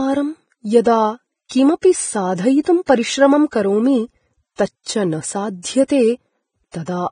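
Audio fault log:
throughout, Vorbis compression: The audio was likely encoded with heavy Vorbis compression, which fits a bitrate around 20 kbps. Nothing remains above 9.7 kHz. The coarsely quantised treble turns into hiss and grain, leaving the speech dull, roughened and blurred at its onsets.
2.86–2.89 s and 4.56–4.59 s, pre-echo: The codec spread quantisation noise across whole transform blocks, so noise meant for sharp attacks filled the quiet just before them. This leaves a short hiss of 25 ms before "परिश्रमं करोमि" and 31 ms after "परिश्रमं करोमि", smearing each onset.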